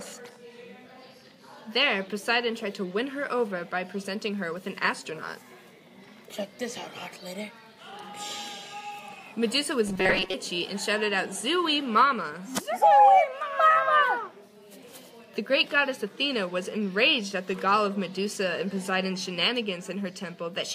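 From 9.88 to 10.35 s the sound hardens into a rigid metallic buzz locked at 188 Hz. This is robotic sound from repeated short buffers, likely from a chunk of about 5 ms being replayed for most of that stretch. Unlike a dropout, nothing goes silent. The fixed pitch gives it away.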